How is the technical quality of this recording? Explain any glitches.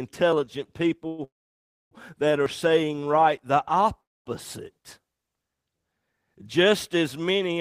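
The recording is marred by two kinds of glitch: three brief skips and three call-style freezes in the speech.

Dropped buffer (overrun), at 0.33, 2.46 and 4.46 s. The likely cause is software failing to read its samples before the audio hardware overwrote them. That slice of sound is lost and the audio on either side is butted together without any silence. Each one is heard as a small jump forward in the speech, roughly 20 ms skipped.

Call audio freeze, at 1.07–1.21 s, 1.24–1.94 s and 4.01–4.29 s. These likely come from network packets arriving late and the jitter buffer running dry. The receiver stretches the last sound into a fading buzz, and in the second and third it then falls quiet until the packets arrive and the speech resumes where it paused. Nothing is lost, but gaps are inserted: 112 ms of fill in the first, 670 ms in the second (620 ms silent), and 247 ms in the third (240 ms silent).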